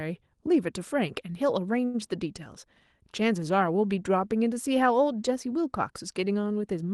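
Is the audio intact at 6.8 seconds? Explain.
Yes, the speech at 6.8 s is intact, with no dropout, glitch or other fault at that moment beyond the ordinary coding character of the call path it passed through.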